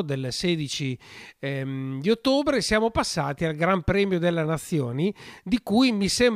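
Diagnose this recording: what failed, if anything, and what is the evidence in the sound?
Nothing in the recording points to a failure at any stage of the chain. No stage, from the analogue wiring through to playback, leaves an audible mark on the speech.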